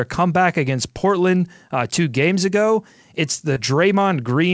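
At 3.54 to 3.58 s there is a short concealed packet loss. About 20 ms of the call arrived too late for the decoder. The receiver stretched the preceding sound to cover the hole, then blended back. It registers as a brief smear in the speech. The call band stops at 8 kHz.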